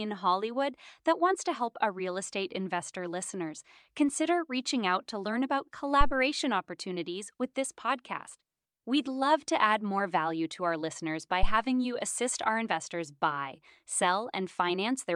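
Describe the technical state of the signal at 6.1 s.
At 6.1 s the signal carries a phantom power thump, running from about 6.01 to 6.15 s. A supply voltage was switched on or off on a live input, and the sudden DC step passed through the coupling capacitors as a single deep low-frequency pulse, peaking around -12 dBFS and dying away in about 31 ms. Unlike a plosive or handling bump, it is one clean electrical step with a smooth decay, rather than the rustle of physical contact or a breath burst.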